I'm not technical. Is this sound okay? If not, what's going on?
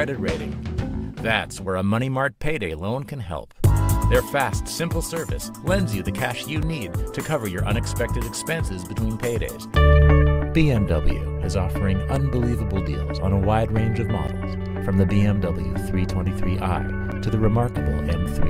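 No. There are four blocks of digital silence: brief dropouts at 6.62, 12.16, 14.28 and 17.12 seconds. The first two last about 3 ms, the last two about 9 ms. Each is heard as a click, likely because the program didn't deliver audio in time.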